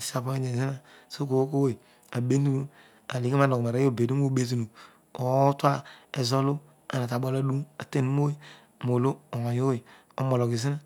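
No technical faults can be heard anywhere in this recording. The speech runs continuously, with no dropouts, clicks, distortion or level jumps at any point.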